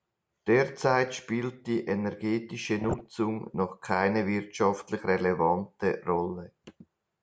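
From 2.79 to 3.15 s the speech breaks into DAB burbling: bit errors, under a percent or so, slip past error correction and put short blips of noise in single sub-bands.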